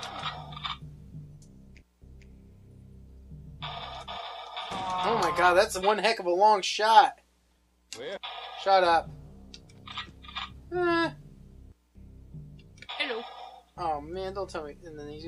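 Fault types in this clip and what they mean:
No faults of any kind turn up anywhere in this recording.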